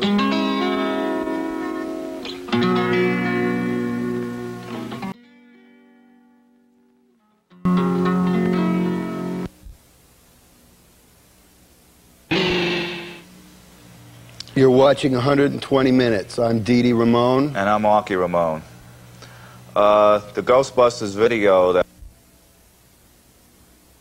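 From 5.12 s to 7.65 s the level drops by about 31 dB, leaving only a faint remnant of the sound before it returns at full strength. The likely cause is one channel inverted: with one side of the stereo pair reversed in polarity, anything common to both channels cancels when they are summed to mono, so the centred content collapses and only the small difference between the channels survives.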